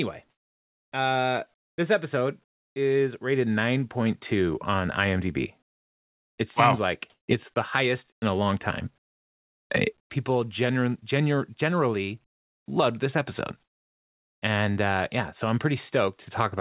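In the pauses of this speech, the background is swapped for a smoother, quieter hiss. This is comfort noise in place of the background, likely because the sender stopped transmitting during silence and the receiver filled the gaps with synthetic noise.

It happens from 0.3 to 0.92 s, about 8 dB down, just before "uh this episode is", and again from 1.54 to 1.78 s, about 22 dB down, before "this episode is rated". The real background sits about 47 dB below the loud speech.

At 6.54 s, sound dropped by the voice detector leaves a 20 ms gap filled with steady noise, likely because a quiet sound was taken for background.

Comfort noise fills 7.1 to 7.56 s. Inside it, at 7.54 s, another detector dropout cuts about 10 ms of sound. Comfort noise returns from 8.12 to 8.22 s, about 17 dB down, and from 8.98 to 10.1 s. The last stretch runs from 12.26 to 12.68 s, about 26 dB down, before "loved this episode".

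Across all of these, the G.711 call path leaves nothing above 4 kHz.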